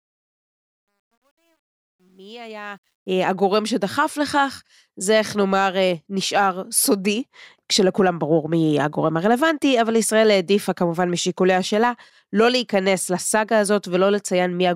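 Truncation distortion on a fade, 0.0 to 3.26 s, worst before 2.32 s: the undithered fade-in, consistent with a 10-bit stage, turns gritty at low level.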